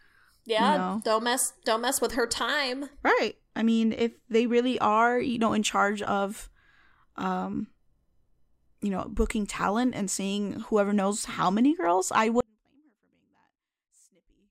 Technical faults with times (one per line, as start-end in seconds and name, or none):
12.40-14.51 audio dropout to a faint residue